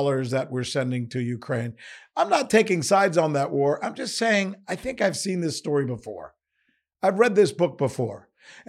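Speech with no audible faults.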